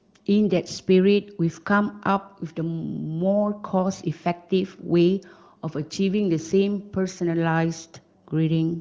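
No faults: the speech comes through an AMR wideband (HD Voice) path at what sounds like one of its upper bitrates, and nothing in the clip registers as a technical problem.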